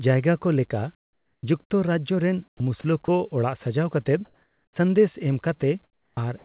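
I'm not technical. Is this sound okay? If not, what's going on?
No. In the pauses of this speech, at 0.95 to 1.43, 2.48 to 2.6, 4.25 to 4.76 and 5.84 to 6.17 seconds, the real room sound is swapped for a flat, quieter hiss. This is comfort noise in place of the background. The likely cause is that the sending end stopped transmitting when nobody was talking, and the receiving end filled the gap with made-up noise.

At 2.57 to 2.6 and 6.15 to 6.17 seconds the talking starts abruptly, its first fraction of a second missing. This is an onset clipped by the voice detector. The detector was likely slow to notice that speech had resumed, so those opening moments were never sent.

Twice more, at 2.81 to 2.84 and 3.05 to 3.08 seconds, a tiny piece of speech vanishes into that same flat hiss. This is sound dropped by the voice detector. The likely cause is that the detector briefly mistook that bit of speech for background and stopped sending. 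Throughout, the call line itself carries nothing above 4 kHz, so the sound is narrow, like an ordinary phone call.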